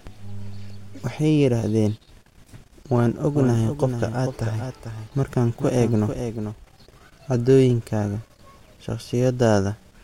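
A doubled audio track runs from 3.29 s to 6.65 s: a second copy of the speech sits roughly 400 ms behind the first and about 10 dB quieter. It is full-band, with no decay or room colour, so it reads as a flat, dry repeat rather than an echo. It switches on and off abruptly at both ends. The likely cause is the same signal being captured again through a slower path and mixed back in.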